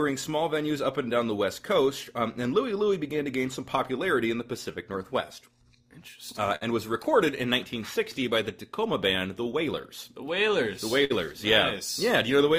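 A steady clock drift between sender and receiver runs through the whole clip: the sender's audio clock runs roughly 4% slow, so the receiver's jitter buffer keeps draining and has to be topped up. On a waveform nothing looks broken, but laid against a correctly timed copy the events would slide progressively later. Spectrogram features keep their frequency positions while their spacing in time stretches slightly. The result of that drift is a train of repeated timing corrections from 0.02 s to 12.37 s, where the receiver repeatedly inserts short duplicated pieces to keep pace. Overall playback runs at about 97% speed and the clip ends up around a third of a second longer. The edits are small and unevenly spaced, heard at most as faint hiccups or a slightly unsteady tempo. On a spectrogram they would appear as tiny repeated slivers or seams, too brief to stand out much in the waveform. Twice the buffer actually ran empty, producing a short stall from a late packet: at 6.56 to 6.63 s the last sound is held for 54 ms, and at 11.04 to 11.12 s for 57 ms, with nothing lost afterwards. 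Each shows as a flat, frozen smear of harmonics on the spectrogram and a briefly sustained, slightly dipping stretch in the waveform.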